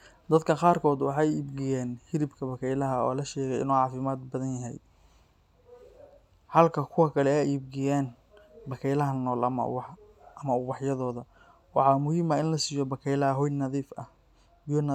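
Listening through the recording, nothing stood out as a technical fault at any point.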